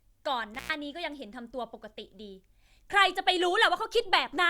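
Speech, with an intermittent contact at 0.54–0.74 s. A loose connection opens for about 106 ms, leaving faint hiss and crackling at both edges, unlike a clean digital dropout.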